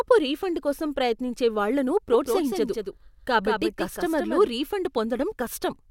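Speech with a doubled audio track from 2.13 to 4.47 s: a second copy trails about a fifth of a second behind, roughly 5 dB quieter, likely from a slower capture path.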